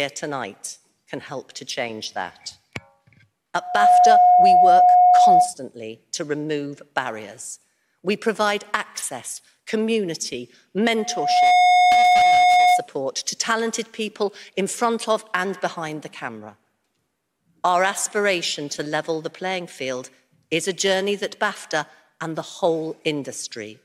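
At 3.59 s a loudspeaker feedback squeal begins. A single tone at 721 Hz swells up over about a third of a second. It sits roughly 10 dB above the surrounding audio and stops at 5.54 s. The same squeal returns from 10.96 to 12.88 s, at the same 721 Hz, taking about half a second to build. A microphone was picking up the loudspeaker it fed. At that one frequency the loop gain went past one, so the tone fed on itself.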